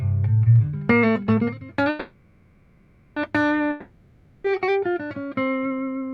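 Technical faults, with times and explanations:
1.89–3.18 s, call audio freeze: the last bit of sound gets stretched into a fading buzz that settles to a low steady noise, then picks up exactly where it left off. Likely packets stalled and the jitter buffer ran dry, so everything after now runs about 1.27 s late.
3.70–4.46 s, long network dropout: again the sound smears into a fading buzz and low noise for about 0.74 s, but this time it resumes further along, so that stretch is simply gone. The likely cause is packets that never arrived, covered by concealment until audio flowed again.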